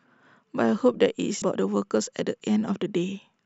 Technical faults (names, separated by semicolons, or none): damaged data in a compressed stream